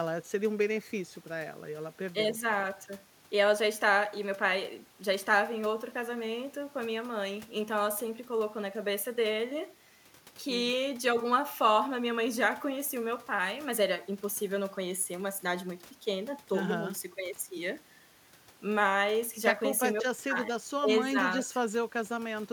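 No technical faults can be heard anywhere in the speech.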